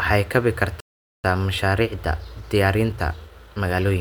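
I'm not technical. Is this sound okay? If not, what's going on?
No. At 0.80 s the speech cuts to silence for about 0.44 s, a playback stall, likely the player running short of data. From 1.24 s to the end, time-compressed catch-up makes the speech run about 1.1 times faster at normal pitch, as the player trims out small pieces to make up the delay.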